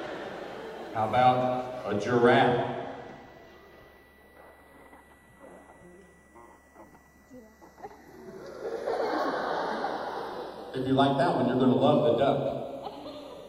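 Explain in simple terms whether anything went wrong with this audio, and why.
Channels drifting apart, throughout the clip. The left and right sides were likely captured on devices with slightly different clocks, so one side slowly slips behind the other, reaching roughly a third of a millisecond by the end. Played through a single speaker, this gives a slow, swirling flanging sound.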